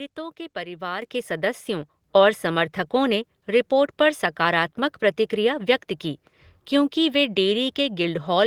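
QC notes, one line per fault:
1.02 s, microphone volume stepped up: after "के परिवार", voice and room noise jump about 8 dB together in one step and stay there, unlike a gradual automatic-gain swell.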